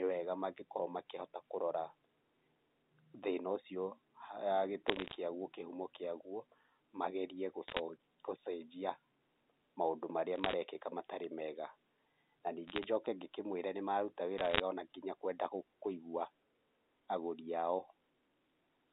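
Bit errors on a digital phone line appear as five short bursts of crackle, at 4.88–5.16 s, 7.68–7.80 s, 10.36–10.53 s, 12.68–12.84 s and 14.38–14.60 s. Within each burst, a fraction of a percent of bits are flipped, and each flip corrupts one sample. Flips landing on the sign or upper bits of a sample produce sharp ticks. Between ticks, the speech passes unchanged through its 250 Hz to 3.7 kHz telephone band.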